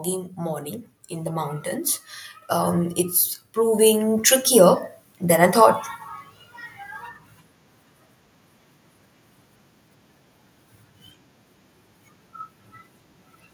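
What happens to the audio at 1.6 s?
By 1.6 s the automatic gain rising that started at 0.34 s tops out, about 4 dB up. The AGC heard quiet input and lifted voice and background together.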